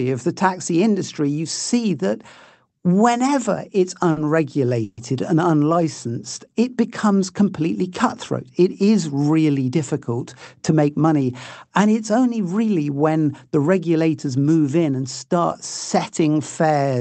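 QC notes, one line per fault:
4.11 to 4.19 s, short stall from a late packet: right after "whenever it's" the sound hangs for a moment, the last fragment held too long with a faint buzzy, slightly dipped texture before it carries on. A packet failed to turn up on time, so the jitter buffer ran dry and the receiver stretched what it already had across about 50 ms, then resumed at the same point. Nothing is lost, but playback now sits about 50 ms later than before.
4.84 to 5.00 s, call audio freeze: just before "and unlicensed it becomes" the sound stops moving forward and turns into a fading buzz for about 130 ms, without ever going fully silent, then picks up exactly where it left off. This is likely a burst of delayed packets emptying the jitter buffer, with the receiver continuing the last sound until the stream returned. Nothing is skipped, but a gap has been put into the flow and the delay grows by about 130 ms.
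10.69 to 11.29 s, jitter buffer speed-up: for roughly 0.6 s the sound runs noticeably quicker, about 112% of normal pace, yet the pitch stays put, so it comes across as hurried rather than higher. The buffer had built up more audio than it aims for, so the receiver trimmed many tiny slices of one or a few pitch periods each, around 70 ms in total, to pull the delay back down. The whole clip passes through an Opus call path at a setting that points to about 24 kbps, with content above 8 kHz cut away.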